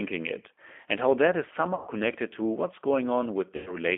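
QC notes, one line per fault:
Throughout, G.729 codec: The sound is confined to a narrow line band of roughly 250 Hz to 3.4 kHz, so it is thin and lacks both low body and upper air. The damage is plainly audible: a slightly rough, synthetic texture. The codec rebuilds each short frame from a vocal tract filter, a pitch predictor and a few pulses, which fits an 8 kbit/s G.729A stream and explains that artificial grain.
1.75–1.89 s and 3.56–3.76 s, VoIP packet loss concealed by the speech codec: The first gap falls between "and how that is" and "to what's", with about 120 ms of audio lost. The second loses about 100 ms. In each gap the decoder stretches its last pitch and filter into a buzzy tone or coloured noise that fades. Because each frame builds on the one before, the sound stays weak or distorted for tens of milliseconds or more after packets resume.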